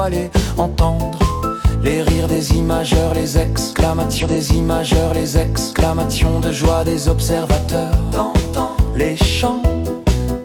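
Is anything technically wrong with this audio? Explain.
Yes. A stream segment repeated from 4.18 to 6.18 s: the player queued the same two seconds twice, so that passage replays after a blip, showing as duplicated waveform blocks.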